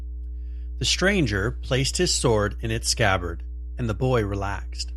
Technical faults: mains hum

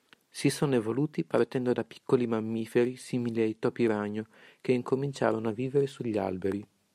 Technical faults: none

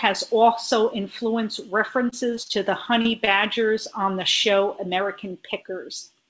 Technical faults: repeated packet loss (robotic sound)

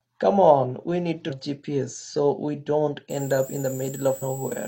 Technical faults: damaged data in a compressed stream; switching supply whistle

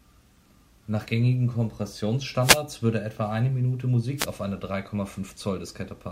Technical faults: wireless microphone noise hit

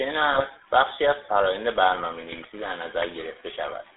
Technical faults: GSM full-rate codec; GSM bit errors

